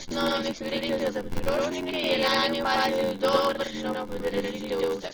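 Throughout the speech, a channel delay (doubling) leaves one side about 92.9 ms late, consistent with a 4096-sample buffer, so the mono sum carries a distinct slap echo at equal level. The speech is also dull and smeared, with a warbling, fizzy edge on sibilants, most likely from AAC compression at a low bitrate near 24 kbps. A block size mismatch (padded) adds a steady 86.1 Hz buzz and slows everything to 0.861 times normal speed with the timbre kept, consistent with zero-filled 512-sample read blocks.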